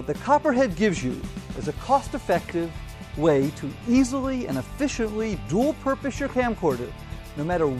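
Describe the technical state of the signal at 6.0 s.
At 6.0 s the signal is intact, with no dropout, distortion, or other fault present at that moment.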